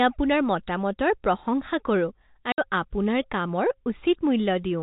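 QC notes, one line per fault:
2.52–2.58 s, packet loss filled with silence: lost packets replaced by silence leave a 60 ms gap with hard edges, fitting two 30 ms packets.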